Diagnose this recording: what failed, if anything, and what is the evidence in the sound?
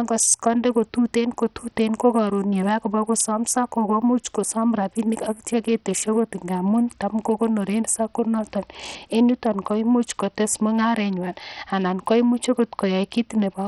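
Bluetooth SBC compression throughout the speech, at the codec stage: treble flickers and drops away under gritty noise, pointing to a starved bit pool near 64 kbps, likely from an SBC link.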